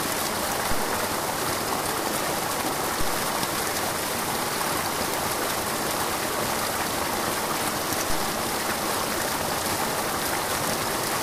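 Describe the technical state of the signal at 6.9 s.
At 6.9 s the signal is intact, with no audible fault at that moment.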